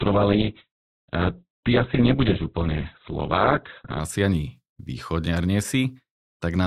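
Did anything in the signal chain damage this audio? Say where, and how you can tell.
Yes, an adaptive stream starting at a low bitrate: nothing above 4.5 kHz until 4.0 s, then a gapless jump to brighter speech as the codec steps up.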